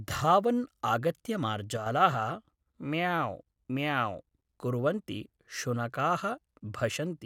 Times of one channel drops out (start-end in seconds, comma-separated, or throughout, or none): 1.77-1.86